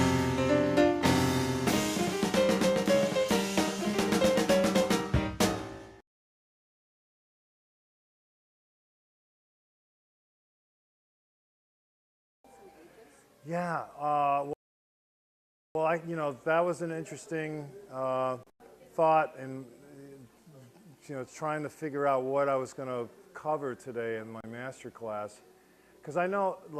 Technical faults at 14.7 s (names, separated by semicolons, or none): rebuffering stall